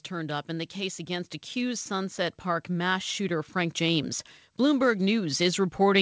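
From 0.09 s to the end at 6.01 s, the speech and the background swell together, growing steadily louder. This is automatic gain rising: the gain control judged the input too quiet and kept lifting it, against a call band that stops at 8 kHz.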